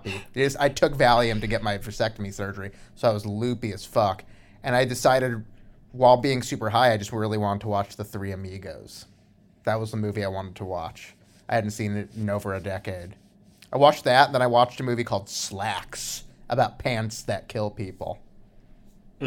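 No technical faults detected in the speech recording at any point.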